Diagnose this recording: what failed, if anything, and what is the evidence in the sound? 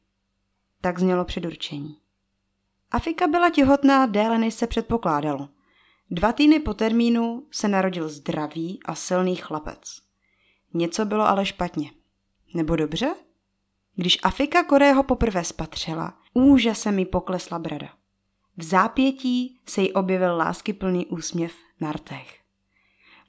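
Nothing stood out on listening to this speech recording that would point to a failure at any stage of the chain.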